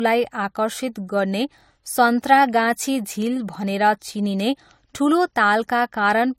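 A speech recording with a transcoding fault between lossy codecs that runs the whole length. Nothing is present above about 16.6 kHz. The top end is cut flat there. Two kinds of coding damage sit on top of each other. The artefacts of one coder are heard together with the different artefacts of another. The likely cause is a low-rate MP3 later re-encoded as AAC-LC at a similar modest rate, so the second pass coded the first pass's artefacts too.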